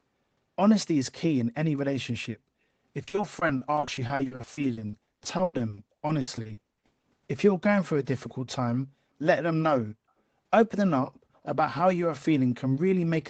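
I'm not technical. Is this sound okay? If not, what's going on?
No. Between 3.03 and 7.29 seconds the speech turns choppy and robotic. This is repeated packet loss. Small chunks of the sound never arrived, over and over, about 52 times in that stretch. Each hole was covered by stretching the last bit of sound, and the longest hole was a tenth of a second. About a third of that stretch is patched-over sound, which gives it the broken quality.

Around 11.34 to 11.4 seconds there is a very faint, brief copy of the speech, arriving about a quarter of a second late. This is an echo leak. The likely cause is that the other side was using a loudspeaker, and its microphone picked up the sound. The call's echo removal then missed a small scrap, which was sent back.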